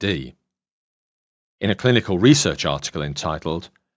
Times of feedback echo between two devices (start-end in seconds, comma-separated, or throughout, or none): none